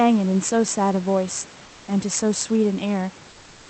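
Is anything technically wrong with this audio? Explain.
Yes. From 1.65 to 1.87 s, about 220 ms, the real background drops out and is replaced by comfort noise, likely from Opus discontinuous transmission, where the sender pauses between speech and the receiver synthesizes filler. The room noise, about 27 dB below the loudest speech, turns steady and featureless and about 2 dB quieter. On a spectrogram, that stretch shows a smooth, uniform haze under the 8 kHz codec cutoff, and the waveform shows a slightly lower, even noise floor.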